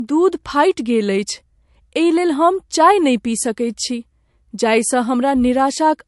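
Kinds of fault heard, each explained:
Low-bitrate audio saved at a high bitrate: the speech was likely squeezed through a heavily compressed MP3 stage and then re-encoded as a much larger MP3, which cannot bring back what the first pass discarded. Nothing is present above about 11.3 kHz for the whole clip, a ceiling that fits an encoder running near 50 kbit/s, and the dull top end and first-pass artefacts remain despite the generous final file size.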